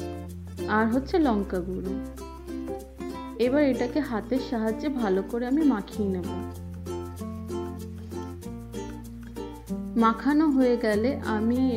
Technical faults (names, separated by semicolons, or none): none